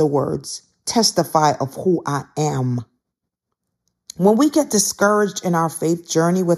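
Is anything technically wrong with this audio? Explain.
Yes. Throughout the speech there is channel delay (comb filtering). One channel arrives a fraction of a millisecond late, around 0.2 ms, which suggests a small sample offset rather than a full buffer. When the two channels are summed to mono, the shared content cancels at regularly spaced frequencies, with the first deep notch near 3 kHz and the next near 9 kHz. That makes the voice sound hollow and slightly dulled in the presence region. A lowpass or ordinary EQ cut would roll off smoothly instead of carving repeating gaps, and a phaser's notches would sweep. Here the notches stay fixed for the whole clip.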